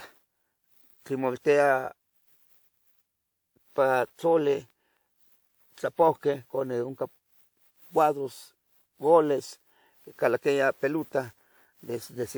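Throughout the speech there is generation loss. The sound is swirly and smeared, with a hollow, watery quality, and consonant attacks are blurred. Content still reaches up to about 20.1 kHz, so this is not a narrow bandwidth. The cause is likely repeated lossy coding, about five passes, which fits a WMA chain at 128 kbit/s. Each pass quantised on a shifted frame grid, so noise stacked up.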